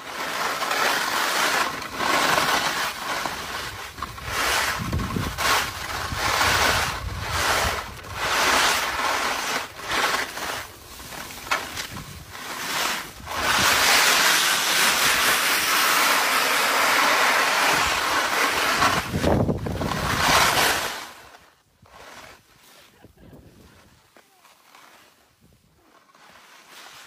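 The audio has brief clicks or tiny skips at 1.81, 3.84, 5.83, 9.79 and 11.77 s. Each is an overlap between stream segments. The 2 s segments overlap in their time stamps. The player then trims 23 to 38 ms of real sound, so the waveform jumps.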